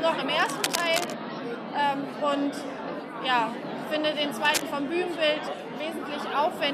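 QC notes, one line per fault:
0.40 to 1.14 s and 4.45 to 4.62 s, cable scratch noise: likely a worn cable or connector shifting, its contact resistance jumping erratically, which injects dense, uneven bursts of scratchy rustling, a little below the audio's level in the first stretch and roughly as loud as the audio in the second.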